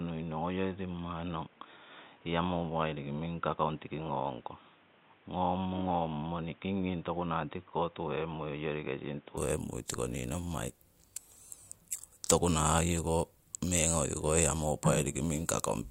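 Until 9.37 s the input had likely switched to a poorer device, leaving the speech boxy, empty above 3.8 kHz and somewhat quieter, then clearing seamlessly at "tiko nii nommai".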